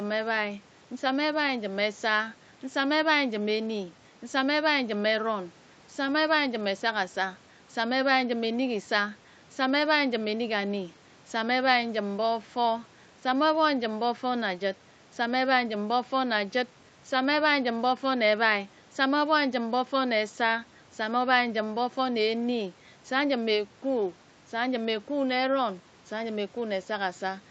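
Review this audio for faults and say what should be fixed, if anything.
Nothing here needs fixing. The speech carries nothing above 8 kHz, which fits a call microphone chain and an Opus call path working as intended at that bandwidth.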